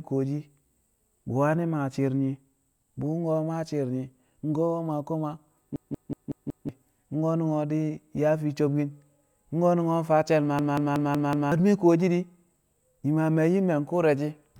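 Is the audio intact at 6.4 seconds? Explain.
No. A system hang loop runs from 5.76 to 6.69 s, just after "maa koma". A frozen system replays one 186 ms buffer, which fits 8192 samples, five times as a 5.4 Hz stutter.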